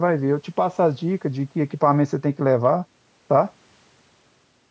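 No technical faults can be heard in the speech, which carries the normal signature of a call's microphone processing: the lowest bass is trimmed by its high-pass filter and nothing sits above 8 kHz.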